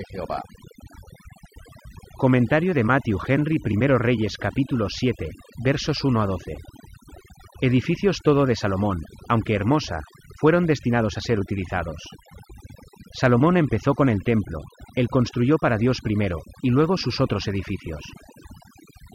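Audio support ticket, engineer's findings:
Noise suppression set too aggressive, throughout. Bands near noise estimate pulled down or gated off, taking low-level speech detail with them. Background drops and breaks up into twinkling specks. Overdone noise removal, whole clip.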